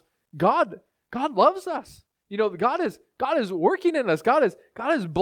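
A call bitrate drop runs from 1.46 to 3.01 s. The link's bandwidth estimate fell and the encoder was forced to spend far fewer bits on the speech, so each frame is coded more coarsely and fine detail is discarded. The degradation fits a fall from 64 kbps to roughly 28 kbps, held at that lower rate for about one and a half seconds before quality returns near 3.01 s.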